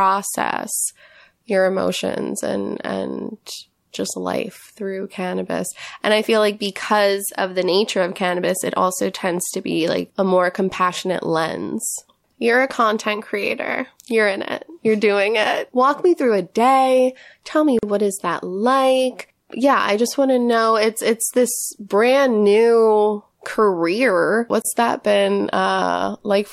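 A speech clip with two gaps at joins of encoded pieces: about 41 ms at 17.79 s before "what is that like", and 27 ms at 24.62 s between "this brand new career" and "that been". Separately encoded chunks were spliced untrimmed, leaving the encoder delay and padding as brief silences.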